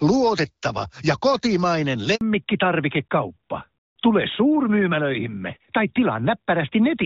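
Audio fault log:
2.15–2.21 s, handover gap: the sound fades away within a few tens of milliseconds and silence follows for the rest of the 60 ms gap, as the call is passed from one network to another and no speech frames arrive during the switch. Whatever was said in that instant is simply gone. On the waveform it shows as a sudden flat line between two stretches of normal activity. A spectrogram shows a thin, empty vertical strip across every frequency.
2.21 s to the end, fallback to narrowband: right after the gap the call drops from HD Voice to an older narrowband codec, and everything above 4 kHz disappears, so the sound turns duller, boxier and rougher than the clearer, lightly coded wideband section before it. The change in quality fits a move from AMR-WB near 12.65 kbit/s to AMR-NB near 12.2 kbit/s. On a spectrogram the upper band is abruptly cut off at 4 kHz from 2.21 s onward.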